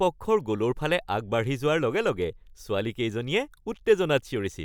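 Nothing technical stands out here: it's a short bit of speech, and I can't hear any fault anywhere in it.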